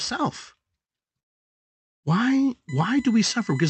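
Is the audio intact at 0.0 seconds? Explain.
Yes, at 0.0 seconds the speech is intact, with no fault at that moment.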